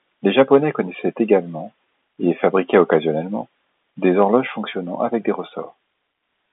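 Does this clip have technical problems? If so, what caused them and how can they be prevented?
Yes. Microphone overload is audible at 0.38–0.57 s, 1.32–1.34 s, 2.74–2.96 s and 4.21–4.24 s, just before "fonctionnant avec des". At these peaks the tops are sliced off, giving the loudest syllables a harsh, crackly edge. The input was likely driven up to about 4 dB past the converter's limit, affecting a small share of samples. On a waveform the peaks appear as flat plateaus, and a spectrogram shows brief broadband smears spreading up to the telephone band's ceiling near 3.8 kHz. Lowering the microphone's input gain so peaks sit well below full scale prevents this.

A microphone volume step-down follows at 4.41 s, still ahead of "fonctionnant avec des". Voice and background both drop by about 3 dB at once. This is likely the call software reacting to the preceding distorted peaks by cutting the device's input level. 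A waveform shows the envelope stepping down abruptly, and a spectrogram shows every band dimming together at that instant. Setting a sensible gain beforehand and disabling automatic microphone adjustment prevents the jump.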